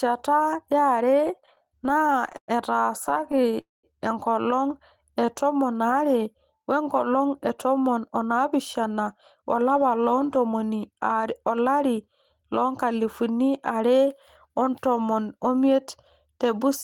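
From 1.27 to 2.51 s the speech breaks into repeated stalls, a stutter: 18 short holds in which the receiver stretched the last sound while waiting for late packets, filling about 285 ms in all, roughly a quarter of that span, with the longest hold 110 ms. Nothing is lost, but the speech drags and catches. On a spectrogram each hold shows as a short block of frozen, smeared harmonics. A second, lighter run from 3.04 to 3.56 s has 9 tiny holds of at most 13 ms, covering about 89 ms, just before "enkolong e tomon".

At 3.61 s the audio freezes. The call audio freeze lasts until 3.86 s: a brief continuation of the last sound fades out, and about 170 ms of silence follows before the speech resumes where it stopped, again ahead of "enkolong e tomon". The likely cause is packets held up in transit, which let the jitter buffer run dry. About 226 ms was inserted and nothing is missing. On a waveform this is a decaying tail and then a flat gap.

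From 5.05 to 5.27 s, just before "e tomon", a jitter buffer slow-down repeats single pitch periods to build reserve. It adds 50 ms, so that stretch plays at 82% speed with unchanged pitch and sounds drawn out. On a spectrogram the harmonics stay at the same height but run longer.

From 7.06 to 10.70 s a jitter buffer speed-up trims pitch-period-sized pieces to shed excess delay. About a third of a second is removed, and the speech runs at 107% speed at the same pitch, sounding a little hurried. On a spectrogram the syllables are compressed in time while the harmonic spacing stays the same.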